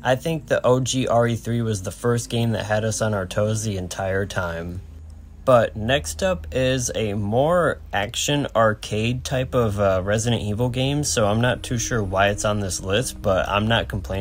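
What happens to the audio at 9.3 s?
Nothing goes wrong at 9.3 s; the audio plays through that moment intact, with no dropout, click or distortion.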